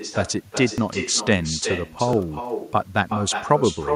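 From the first syllable, every bit of speech has a second copy trailing it by roughly 400 ms, sitting about 8 dB below the original and sounding thinner. That's echo with no canceller: the far end is playing the call through a loudspeaker, their mic picks it up, and nothing strips it out, so the talker's own voice comes back after the network round trip and shadows everything for the whole clip.

At 0.78 s and again at 2.13 s the sound jumps forward slightly, with no gap of silence. Each skip loses only about 10 ms or so, a sliver rather than part of a word. The likely cause is a dropped buffer (overrun): the software didn't pull its samples off the hardware in time, they got overwritten, and the audio on either side of the lost chunk was butted straight together.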